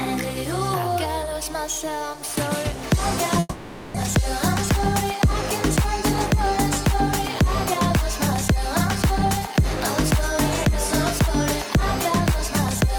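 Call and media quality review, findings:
Long network dropout, 3.39 to 3.98 s. Likely cause: packet stream interrupted upstream, jitter buffer starved. Receiver concealment extends the last sound for about 570 ms as a fading buzz or hiss, roughly 10 ms of silence, then audio resumes with about 400 ms of material gone. Playout delay shifts by around 150 ms afterward.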